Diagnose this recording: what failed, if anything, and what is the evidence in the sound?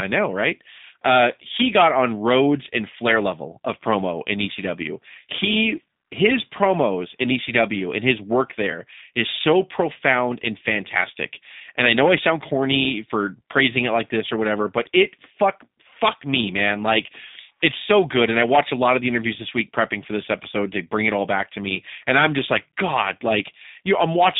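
The codec stage failed. G.729 codec damage runs throughout: the speech is rough and synthetic, and nothing passes above 3.7 kHz, which fits an 8 kbit/s stream.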